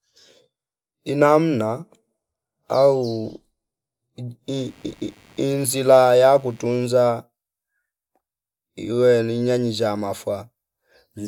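From 4.58 to 6.68 s, computer activity noise appears: a faint buzzing chirp, well below the speech, pulsing around a hundred times a second. Shifting processor load disturbs the shared ground, and unlike steady mains hum, it starts and stops with the computer's activity.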